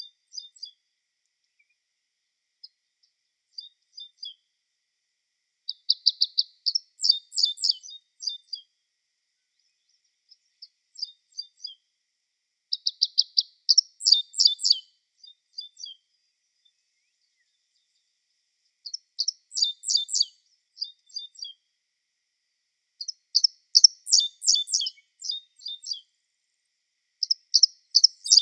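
No technical faults are audible anywhere in the recording.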